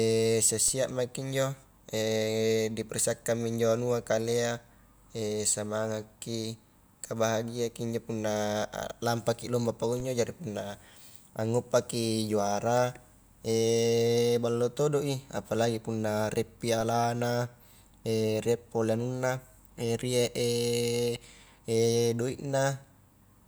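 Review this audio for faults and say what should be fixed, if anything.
The waveform's zero line jumps by a DC step of about -31 dBFS at 0.68 s and again at 10.0 s. Each offset then drains away through a 20 Hz high-pass, so each step sounds like a low thump while the speech carries on unaffected. To prevent it, keep converter recalibration and offset-carrying input switching out of the live signal path, or high-pass and fade across any such switch.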